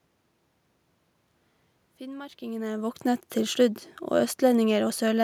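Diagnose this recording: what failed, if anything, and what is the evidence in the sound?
No system faults detected.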